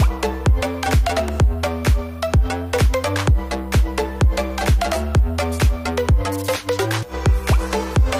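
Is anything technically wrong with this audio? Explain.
Yes. For the whole clip there's low bit depth with noise shaping: the audio's quantised coarsely, consistent with about 9 bits, and the rounding error's pushed upward in frequency. You get a steady, thin hiss climbing toward the top, roughly 35 dB under the signal.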